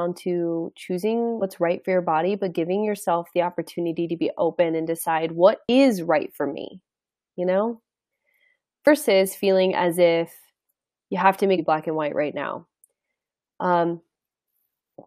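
Speech with four quick glitches at 1.41, 5.68, 8.86 and 11.58 s, each a classic case of damaged data in a compressed stream: corrupted bytes make the decoder misread frames, lose sync and hunt for the next header, spitting out a brief chirp, squawk, click or short hole.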